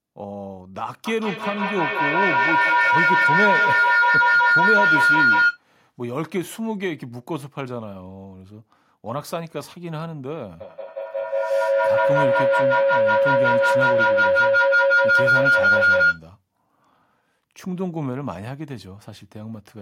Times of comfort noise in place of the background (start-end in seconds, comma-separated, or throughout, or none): none